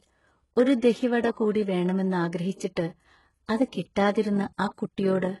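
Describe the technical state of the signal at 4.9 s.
At 4.9 s you're hearing two things stacked. First, there's HE-AAC compression running through the whole clip. The damage is heavy and nothing sits above 11.5 kHz, which fits a very low bitrate, around 12 kbps. The codec keeps the lower band and fakes the treble by copying lower bands upward under a coarse envelope. The harmonics don't line up across the seam, so s sounds come out gritty, metallic or lispy. This is likely the cause, judging by that sound.

Second, from 4.34 s to the end of the clip there's overlap-add ripple. The audio was chopped into windowed frames and rejoined with an overlap that doesn't sum to a flat gain. So the level pumps by about 6 dB once per frame, somewhere around 40 times a second. On this speech that comes across as a rough, fluttery tremolo laid over everything through that stretch, including 4.9 s.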